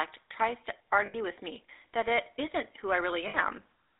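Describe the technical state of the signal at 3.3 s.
At 3.3 s the signal is inside a burst of lost GSM frames, running from 3.28 to 3.37 s. The gap lasts about 60 ms, which fits three missing 20 ms frames. The decoder fills it by reusing the last good frame's settings. It never reaches silence in that span. Instead the voice hangs on a rough, metallic ring before normal decoding resumes.

Underneath, the whole clip carries the GSM full-rate codec at 13 kbps. It rebuilds the voice from a vocal-tract model driven by a sparse pulse excitation. That gives a plainly audible buzzy, gravelly roughness. The line band sits between 300 Hz and 3.7 kHz. So the voice sounds thin, with no low body and no air above that limit.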